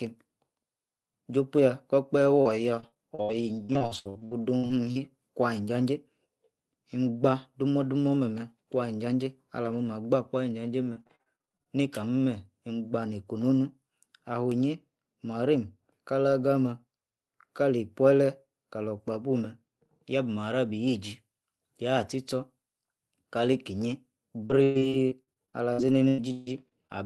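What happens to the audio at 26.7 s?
Repeated packet loss (robotic sound) covers 26.7 s, within a stretch from 24.46 to 26.91 s. More than a dozen packets arrive too late or not at all, and each hole is patched by extending the preceding sound. The longest gap runs 142 ms, and about 27% of the span is concealed. Around 680 ms of audio is missing, so the sound turns choppy, with fragments dropping out between the smeared, robotic fills.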